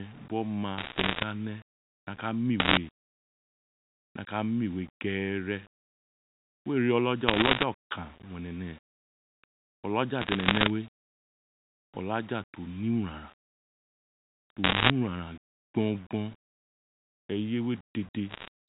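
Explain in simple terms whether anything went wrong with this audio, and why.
Two things went wrong with this speech. The whole recording has a grainy, rough edge that shifts with the talking, and quiet moments sound gritty or sputter. This is low bit depth without dither: the sound was likely stored with only about 7 bits and rounded, so the rounding errors follow the voice.

Separately, six short bursts of ticks and crackle appear at 0.78–1.24 s, 2.60–2.77 s, 7.28–7.64 s, 10.20–10.70 s, 14.64–14.90 s and 18.30–18.48 s. These are bit errors on a digital phone line. A small share of bits in the telephone signal were flipped, and each one knocks a single sample off; a hit on a high bit produces a sharp click. The phone-style coding itself, with its narrow telephone sound, is working as intended.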